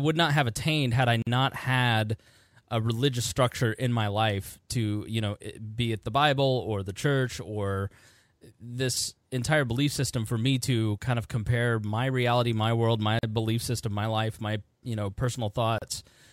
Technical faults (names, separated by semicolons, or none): gap at a join of encoded pieces